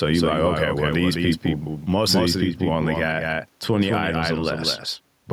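From start to finish, the speech carries a doubled audio track: a second full-band copy runs about a fifth of a second behind the original and around 5 dB quieter. That spacing is too wide to blur into the original, so every syllable has a distinct slap after it, with no reverberant tail or room colouring on the repeat. The likely cause is the signal being captured twice, once through a slower path, and both copies being summed into the mix.

Gain pumping also runs through the whole recording, with the gain swinging on the order of 10 dB. The room noise sits about 44 dB under the speech. Speech level is compressed and flattened. This is likely the input gain set far too high, with a fast limiter clamping down on every loud onset.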